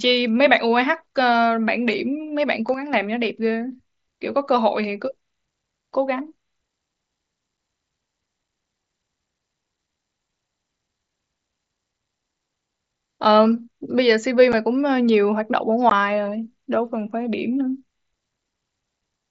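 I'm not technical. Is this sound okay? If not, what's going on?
No. There are two kinds of fault in this speech.

At 2.74 seconds the level suddenly drops, then comes back at about 2.93 seconds. This is a sudden gain jump. The speech and the background hiss get quieter together, in one instant, with no smooth fade. That points to a volume setting likely being changed abruptly somewhere in the chain. It lasts about a fifth of a second, so it sounds like a brief dip.

The speech travels over a Bluetooth headset link, using the mSBC wideband headset codec. Three times, a tiny piece of it never arrives. This is unconcealed Bluetooth headset packet loss. The gaps come at 7.57, 14.52 and 15.90 seconds. The first two last about 7.5 thousandths of a second. The last one is twice as long, about 15. Nothing fills these holes, so the sound cuts out sharply.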